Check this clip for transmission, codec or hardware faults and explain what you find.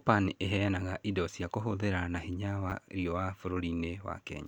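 There's one fault here, a repeated buffer at 2.70 to 2.72 s, right after "cia kũhũthĩra na hinya". Fresh audio didn't arrive in time, so a 10 ms chunk played two extra times with hard joins, giving a brief buzzy click and dropping about 20 ms of sound.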